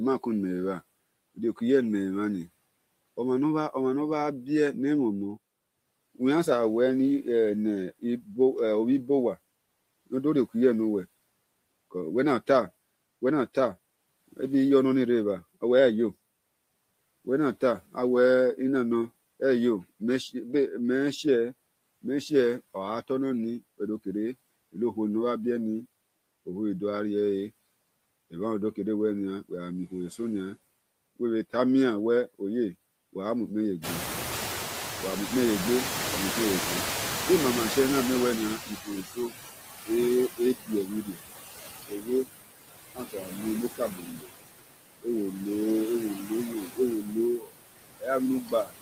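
Noise suppressor artifacts run through the whole recording: the steady background is pulled down by about 19 dB, leaving a residue that dips between phrases. Around 34 s the room noise jumps by about 22 dB, and the noise suppressor is caught up short. From 33.83 to 39.03 s the louder noise passes with only about 13 dB of reduction, sinking as the estimate adapts over 5.2 s. Speech cut by the noise suppressor follows at 38.66–41.19, 41.8–42.29, 42.94–44.29, 45.02–45.46 and 46.14–48.82 s. The noise suppressor treats parts of the speech, now only about 9 dB above the noise, as noise. It dips them by up to about 18 to 21 dB, so word fragments sound swallowed. The affected portions add up to under a second in most spans and a fraction of a second in the shorter ones.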